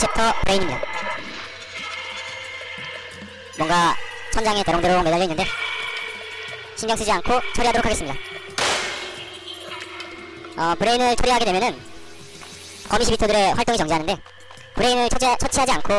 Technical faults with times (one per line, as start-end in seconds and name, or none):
0.00-15.98 wrong sample rate